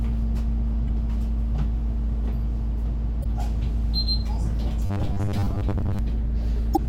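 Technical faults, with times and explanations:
0.87–0.89 s, 3.20–3.26 s and 6.73–6.78 s: damaged data in a compressed stream. Each event is a brief chirp or blip where the decoder hit corrupted frames, lost sync and resumed at the next valid frame header.
4.86–5.99 s: robotic sound from repeated short buffers. The sound turns into a rigid metallic buzz at 100 Hz, which fits a 10 ms chunk being replayed. Roughly half the span is repeats, likely from new audio arriving too seldom, with the skipped material lost.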